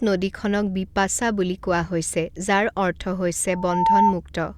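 At 3.47 s a loudspeaker feedback squeal begins under the speech: a single tone at 901 Hz swells over a little under half a second until it stands roughly 10 dB above the voice, then stops at 4.18 s. The microphone was picking up its own loudspeaker, and at that one frequency the loop gain passed unity. The tone's self-driven swell sets it apart from a steady interfering whistle, which would arrive at full level.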